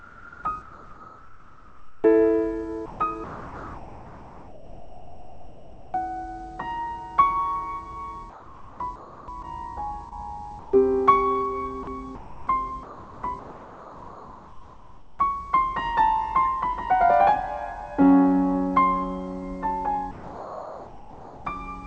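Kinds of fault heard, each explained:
Comfort noise in place of the background: From the start to about 2.0 s, and again around 8.3 to 9.5 s and 10.1 to 10.7 s, the real background gives way to a steady, featureless hiss. This is likely comfort noise, synthesised at the receiver while the sender paused transmission.
Sound chopped by the voice detector: Between about 2.9 and 5.9 s, and again from 11.8 to 15.2 s, the sound turns choppy, cutting in and out. The sender's voice detector likely toggled repeatedly, replacing quiet passages with comfort noise.
Short concealed packet loss: Two brief smears occur, at about 9.42 to 9.45 s and at 10.09 to 10.13 s. Each time about 20 ms of audio never arrived in time, and the receiver bridged the gap by extending the preceding sound before blending back into the real signal.
Sound dropped by the voice detector: From about 20.1 to 21.5 s the sound gives way to steady noise, and close to a second of real audio is lost. 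The voice detector likely mistook that quiet material for background and stopped sending, so comfort noise fills its place.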